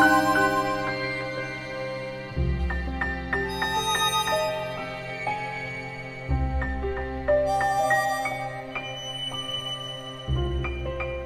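Nothing is technically wrong with this audio, so there are no times or causes to give.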